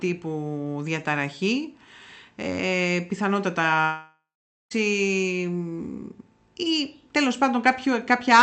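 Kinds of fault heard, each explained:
Long network dropout: from 3.81 s to 4.73 s the speech gives way to a buzzy continuation of the last sound that fades, leaving about 0.46 s of near-silence before speech resumes with roughly 0.9 s of it gone. This is likely the receiver concealing a long run of lost packets. A short packet-loss glitch lasts only tens of milliseconds, and a plain mute cuts off cleanly without the fading tail, which here sits on speech band-limited near 8 kHz.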